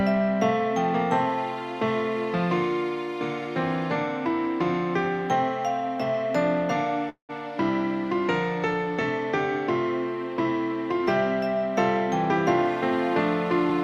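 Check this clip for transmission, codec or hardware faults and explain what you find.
One fault is present: a call audio freeze from 7.09 to 7.31 s. The last sound before the break is carried on as a short buzzy tail that fades out, leaving about 120 ms of silence before the audio resumes. The likely cause is packets held up in transit until the jitter buffer ran dry, so the receiver filled about 195 ms on its own. Nothing is lost. Everything after 7.31 s simply arrives 195 ms later than it should.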